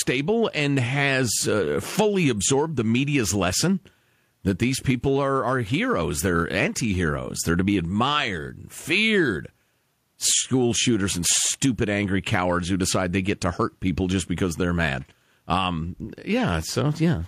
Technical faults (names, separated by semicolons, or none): none